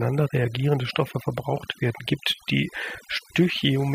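A speech clip processed throughout by overdone noise removal: a noise reduction stage was set far too aggressively, so whenever a frequency band sat close to its estimate of the background noise it cut that band deep or shut it off entirely, taking the quieter parts of the voice along with the noise. The background drops away and breaks up into twinkling, chirpy specks.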